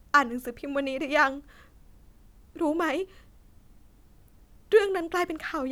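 Nothing stood out on listening to this speech recording.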